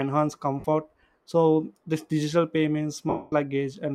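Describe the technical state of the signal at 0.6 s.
At 0.6 s the speech hits lost LE Audio frames, from 0.60 to 0.66 s: about 52 ms missing across a 60 ms stretch, most of it in one run of roughly 50 ms, which fits several consecutive short LC3 frames. The decoder fills the hole by replaying the last good spectrum with randomised phase signs, then fading it. The voice briefly turns into a breathy, noisy smear that sinks toward quiet. A plain dropout would instead cut to hard silence.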